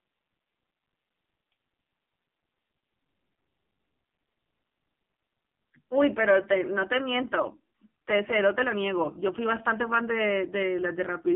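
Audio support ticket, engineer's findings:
AMR narrowband mobile codec, whole clip. Band-limited to roughly 150 Hz to 3.5 kHz, nothing above 3.7 kHz. Heavy buzzy, synthetic texture on the voice, which fits a low AMR-NB mode around 6 kbps. Too few pulses per subframe to drive the vocal-tract model cleanly.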